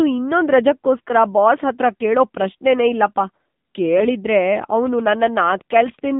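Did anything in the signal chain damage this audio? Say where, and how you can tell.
Yes. The codec stage shows it first: the whole clip runs through the AMR narrowband mobile codec, and at what sounds like the 7.4 kbps mode the speech is audibly buzzy and synthetic. The line band sits at about 150 Hz to 3.7 kHz, so there's no air on top at all. That's the vocal-tract model doing its best with a handful of pulses per subframe and a squeezed bit budget.

Then there are AMR bit errors over the network, around 0.96 to 1.00 s and again at 3.97 to 4.09 s. Pitch and level hold roughly steady, but the voice goes hoarse and gargly for those stretches, more so in the second one. That points to weakly protected bits in a few consecutive frames arriving flipped while the checksum still passed, so the excitation pulses and fine parameters get decoded wrong.

Last, a train of clicks runs from 4.63 to 6.12 s. 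It's about fifteen similar ticks at a steady 8.1 per second, peaking roughly level with the speech and clearly present in the gaps too. That regular spacing and the much-the-same shape of each click suggest something injecting pulses into the chain, likely electrical interference or a struggling interface rather than anything the codec would produce.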